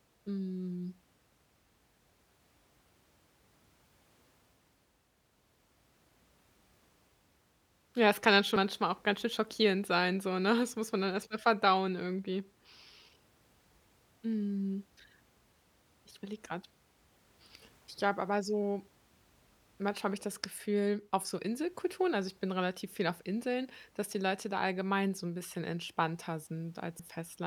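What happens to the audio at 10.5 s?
Nothing goes wrong at 10.5 s: the speech there plays through intact, with no dropout, click, distortion or other fault.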